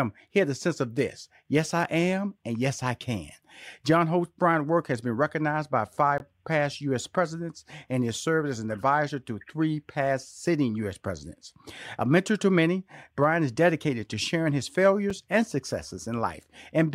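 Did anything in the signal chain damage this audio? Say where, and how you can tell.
Yes, there are two blocks of digital silence in this speech, and they point to the driver or buffer stage. At 6.18 s the audio drops to silence for about 20 ms, a short hole. At 15.10 s there's a second one, only about 5 ms, which comes across as a single tick. The hard cut with no fade fits the playback process failing to fill the output buffer in time.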